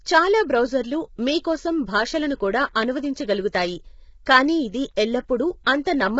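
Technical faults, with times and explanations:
throughout: low-delay AAC compression. A low-delay transform codec, likely AAC-ELD, is starved of bits. The heavy damage points to a bitrate near 16 kbps. Its short frames blur the pitch harmonics and fill the gaps between them with noise, so the speech sounds rough and grainy. Nothing reaches above 7.7 kHz.
4.96 s: pre-echo. Quantisation noise sized for a sharp attack is spread across the whole transform block, including the quiet stretch before the attack. This leaves a short hiss about 11 ms ahead of the onset and makes the attack itself sound soft and smeared.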